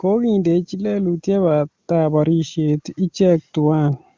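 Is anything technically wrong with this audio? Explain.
Yes. Automatic gain rising runs from 0.05 to 4.01 s: the gain control judged the input too quiet and slowly lifted it by about 8 dB, so speech and background swell together.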